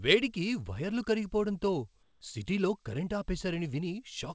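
Speech over a G.722 call path with nothing above 8 kHz; from 2.03 to 2.21 s the background becomes steady, featureless comfort noise about 2 dB quieter, likely from discontinuous transmission, showing as a flat, smooth band on a spectrogram.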